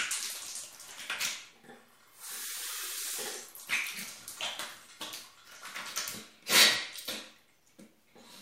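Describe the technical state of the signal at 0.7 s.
At 0.7 s the signal is intact, with no audible technical fault at that point.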